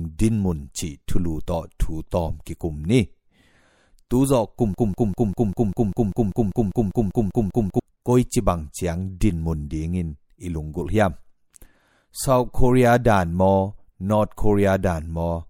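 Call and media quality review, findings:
Broken-record loop, 4.74 to 7.80 s. A 197 ms fragment of speech repeats exactly, 15 times back to back. Likely a stalled player or stream resending its last buffered chunk. The audio due in that span is lost.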